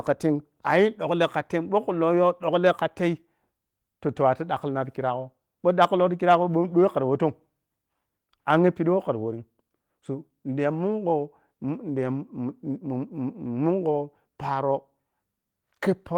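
No faults are present in this speech: the Opus voice compression runs in hybrid mode at about 20 kbps with a fullband response reaching about 20 kHz, and its coding damage stays light.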